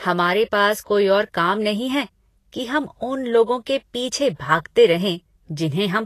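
From start to finish the speech carries plainly audible damage of the kind left by low-bitrate lossy coding, likely Vorbis compression at a setting that fits roughly 33 kbps. The encoder keeps only a coarse sketch of the upper spectrum, so fine treble detail becomes grainy hiss and consonant attacks smear. On a spectrogram, energy stops abruptly at about 14.2 kHz, with blotchy, speckled patches below the cut-off where detailed harmonics should be.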